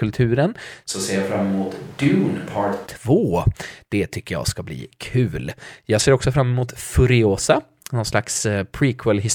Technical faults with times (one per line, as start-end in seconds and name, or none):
0.93-2.85 switch to a distant microphone